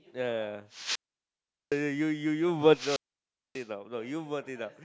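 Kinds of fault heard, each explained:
Wireless microphone squelch dropout: at 0.72–1.81 and 2.66–3.66 s the radio link fades, hiss rises, and the receiver's squelch mutes the speech for 0.76 and 0.59 s.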